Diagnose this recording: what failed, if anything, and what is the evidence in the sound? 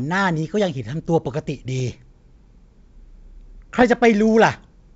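The transmission link has bit errors on an ADPCM link, carried over what sounds like full-rate G.722. Rough, poppy bursts hit at 1.78 to 1.95 s and 3.75 to 3.83 s. Each flipped bit throws the decoder's step size and predictor off, so the damage smears on for milliseconds.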